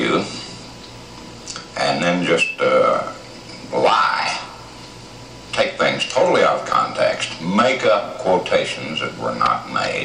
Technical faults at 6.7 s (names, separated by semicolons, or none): loose connector crackle